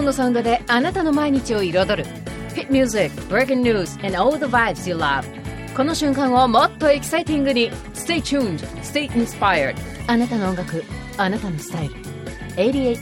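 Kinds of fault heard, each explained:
No faults can be heard.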